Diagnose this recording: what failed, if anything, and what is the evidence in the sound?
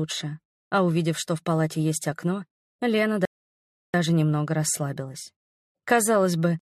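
Playback failed with a rebuffering stall. The sound drops to silence from 3.25 to 3.94 s, then resumes exactly where it stopped. Nothing is lost; the player simply ran dry, adding 0.69 s.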